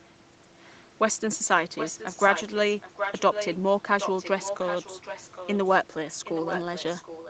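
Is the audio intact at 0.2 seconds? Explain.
Yes, the speech at 0.2 seconds is intact, with no fault at that moment.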